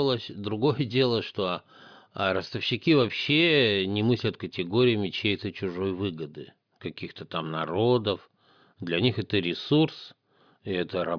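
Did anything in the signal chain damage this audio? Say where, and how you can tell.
No, nothing in the signal chain damaged this audio.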